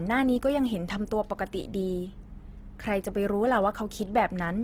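Throughout, the speech sounds grainy and rough, with noisy highs reaching 20.2 kHz. The cause is likely Opus compression in music mode, consistent with about 16 kbps.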